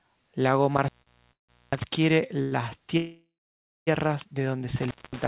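From 0.77 to 1.84 s an intermittent contact appears: a loose cable or plug in the speech chain breaks the circuit for about 0.64 s in total. The signal drops away abruptly, crackle marks the edges of each break, and only faint hiss remains while the connection is open. Inside that stretch, at 1.02 to 1.08 s, comes a short stall from a late packet. One packet missed its slot, the jitter buffer ran dry, and the receiver held the last sound for 44 ms until the packet landed, so the audio lingers with a slight buzz before carrying on with nothing lost.

At 1.32 to 1.51 s a call audio freeze follows. Packets were likely held up in transit and the buffer emptied, so the receiver padded 0.16 s, a fading buzz that sinks into about 0.15 s of silence, then resumed where it stopped, with nothing dropped.

A second short stall from a late packet at 2.43 to 2.53 s stretches one sound by 88 ms, audible as a held, slightly buzzy tone.

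From 2.97 to 3.89 s a much longer freeze, likely from the same kind of hold-up, inserts 0.89 s. The held sound decays into roughly 0.58 s of silence before the speech picks up again.

From 4.76 to 5.27 s the intermittent contact returns, opening for about 0.22 s with crackling edges and hiss. Throughout the clip the call path cuts off everything above 4 kHz, which fits a narrowband G.711 codec.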